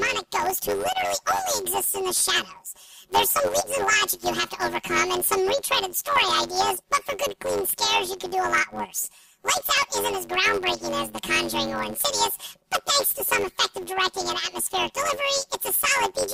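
From start to finish the sound carries a robotic buzz at about 94 Hz, with no clear octave shift in pitch. This is planar audio read as interleaved. Each block stores all of one channel's samples followed by all of the other's, but playback treats them as alternating left-right pairs. Every 10.67 ms block therefore plays twice at double speed, once per channel, and this repeats at the block rate. The timing points to 512-sample blocks.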